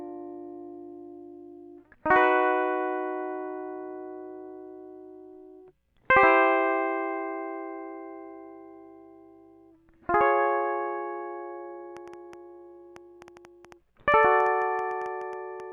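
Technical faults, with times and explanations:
11.97 to 15.61 s, train of clicks: a repeated pulse gets into the signal path, most likely interference from nearby equipment or a faulty connection or power supply. About six clicks per second arrive at an uneven pace, some twenty in all, each much the same shape and roughly as loud as the music itself. The result is a ragged ticking or popping laid over the music until just before the end.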